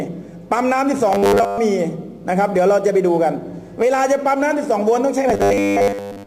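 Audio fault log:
1.13–1.58 s and 5.30 s to the end, robotic sound from repeated short buffers: the sound turns hard and metallic, locked to a steady buzz at 100 Hz that loosely tracks the underlying sound. The likely cause is new audio arriving too slowly, so playback fills the gaps by looping the last fragment, about 10 ms given the 100 Hz buzz. Most of the real audio in these spans is skipped rather than heard.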